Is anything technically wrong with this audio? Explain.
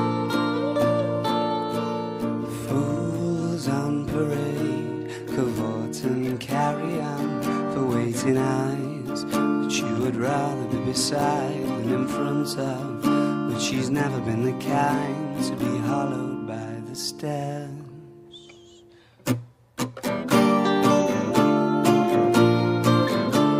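No, nothing technically wrong can be heard in this audio. The signal stays steady throughout, with no audible disturbance at any point.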